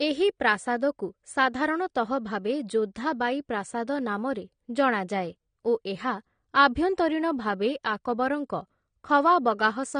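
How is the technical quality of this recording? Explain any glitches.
The recording is held back by codec damage that runs through the whole speech clip.

AAC compression, throughout: nothing is present above about 9.7 kHz, so the speech sounds dull and lacks air. Sibilants turn fizzy and smeared, and sustained vowels have a warble. The likely cause is AAC-LC coding at a low bitrate, one that fits roughly 32 kbps. Starved of bits, the encoder lowered its cut-off and quantised the remaining frequency bands coarsely against its hearing model, leaving gaps and rough fill in the spectrum.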